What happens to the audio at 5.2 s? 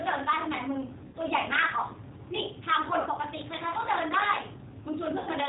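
From 5.18 to 5.30 s the speech smears into a buzzy tone or coloured noise that fades, and stays weak and distorted just after. This is VoIP packet loss concealed by the speech codec. About 90 ms of audio went missing, which fits three lost packets, and the decoder stretched its last pitch and vocal-tract filter with falling gain.

Underneath, the G.729 codec colouring is plainly audible. The sound is rough and slightly synthetic with nothing above 4 kHz, as expected from an 8 kbit/s codec rebuilding speech from a filter, a pitch predictor and a few pulses per frame.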